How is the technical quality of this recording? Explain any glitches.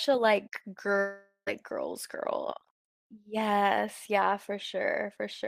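One glitch stands out: a gap in the speech between about 0.99 and 1.49 s. It sounds like a long network dropout is the likely cause. Audio stopped arriving for about half a second, and roughly 480 ms of speech was lost. The receiver covered the hole by extending the last sound, so a fading tail fills most of the gap. It dies into about 90 ms of silence. Speech then resumes mid-flow, with the lost part skipped.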